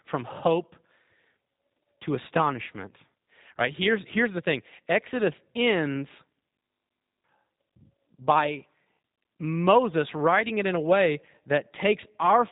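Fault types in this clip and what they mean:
G.729 codec: The speech sounds plainly rough and slightly synthetic, and it is boxed into a narrow band with nothing above 3.8 kHz, so sibilants and breath lose their edge. This comes from a low-rate VoIP coder that does not keep the waveform. It rebuilds each short frame from a vocal-tract filter, a pitch predictor and a few pulses, which fits a G.729A stream at 8 kbit/s.
System hang loop: From 6.6 s to 7.24 s the speech gives way to a steady, mechanical buzz at 50 Hz. A single 20 ms piece of audio repeats exactly, back to back, and about 0.7 s of the real audio never arrives. The computer or audio driver froze while the sound hardware kept replaying the same short ring buffer. The 20 ms loop length fits a buffer of that size.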